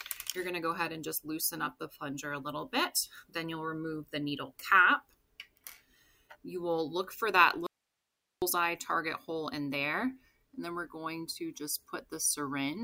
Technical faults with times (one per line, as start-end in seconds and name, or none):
7.66-8.42 audio dropout to a faint residue